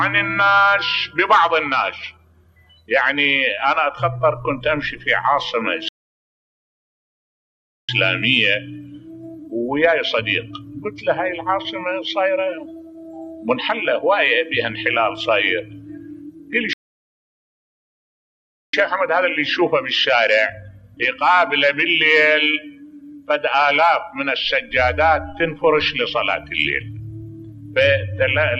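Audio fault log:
5.88–7.89 s and 16.73–18.74 s: playback stall. The sound halts for 2 s, likely a data-starved player. This is far longer than a dropout's brief gap.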